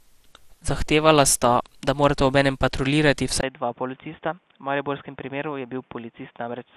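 From the first moment the speech has a swirly, hollow quality with smeared consonant attacks. This is generation loss, likely from being decoded and re-encoded roughly ten times, in a way that fits an MP2 chain at around 96 kbit/s. Each pass requantised on a shifted frame grid, so the errors piled up. On a spectrogram, energy stops sharply at 14.3 kHz, with blotchy holes and a watery texture below, and onsets are softened.

At 3.41 s, right after "da morata obenem patruljirati", a 20 ms silence appears, and then the sound turns dull and boxy until the end. This is an input switched to a poorer device, likely a change of microphone or headset profile. The spectrogram shows a 20 ms gap, then nothing above 3.6 kHz. A new noise floor sits about 40 dB below the speech, and the waveform drops to a level several decibels lower.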